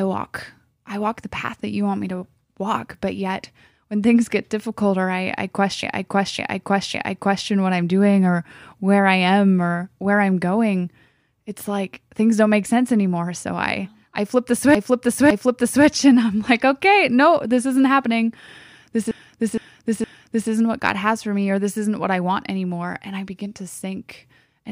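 Repeated frames at 5.83–7.50 s, 14.75–15.86 s and 19.11–20.51 s: a run of compressed frames was delivered more than once, so the speech stutters. A 557 ms block replays three extra times after "difficult or I I", twice before "and I'm like okay". Then a 464 ms block replays three times. Every replay lengthens the audio.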